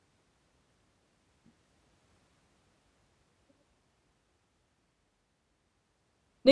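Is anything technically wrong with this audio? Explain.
No, nothing in this speech recording stood out as a technical problem on listening.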